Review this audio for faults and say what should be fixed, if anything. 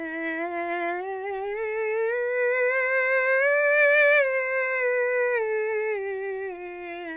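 Nothing needs fixing, as no faults are audible in this music clip.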